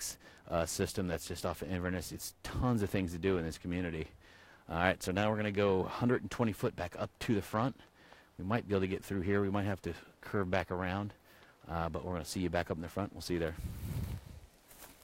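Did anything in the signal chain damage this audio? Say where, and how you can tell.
Yes, at the converter. There's periodic clock jitter across the whole clip: a rough, metallic edge riding on everything. It comes from the sampling clock wobbling at around 700 Hz, which throws sidebands that far above and below each component, worst on the high end.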